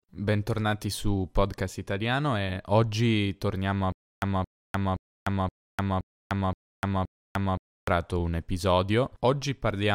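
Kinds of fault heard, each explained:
Stutter with silent gaps: Just after "e oggi torniamo a", the speech stops moving forward from about 3.92 s to 7.88 s. A fragment of about 220 ms plays, then about 300 ms of dead digital silence follows. The pair repeats every 520 ms or so, seven times in all. The likely cause is a stalled player or stream replaying its last fragment on each retry and then running empty. The speech that belonged in that stretch never arrives.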